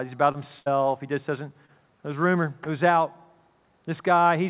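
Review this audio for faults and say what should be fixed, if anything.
Short concealed packet loss occurs twice, at 0.32–0.36 s and 1.66–1.70 s. Each time, about 20 ms of the call arrived too late for the decoder, and the receiver patched the hole by extending the sound just before it, as a pitched continuation or as shaped noise, then crossfaded back into the real signal. Each patch is heard as a brief smear or wobble, and anything very short that fell in the gap is lost. A larger jitter buffer or forward error correction on the link would prevent this.

A burst of packet loss runs from 0.60 to 0.68 s. Here roughly 60 ms went missing in one stretch, too long for a seamless patch. The receiver kept extending the last sound while fading it down, so the gap is heard as a held, decaying buzz or hiss. The audio then picks up further along, and whatever fell inside that 60 ms is simply gone. 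The hard 4 kHz ceiling across the clip is the normal band limit of the call codec, likely G.711 A-law, and is not part of this fault. Redundant audio encoding or a network path with fewer consecutive drops would prevent bursts like this.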